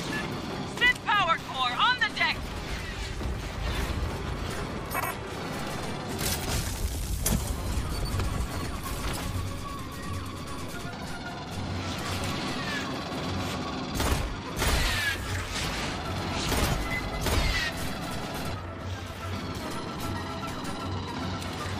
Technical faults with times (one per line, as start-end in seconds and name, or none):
8.31 compressed frames skipped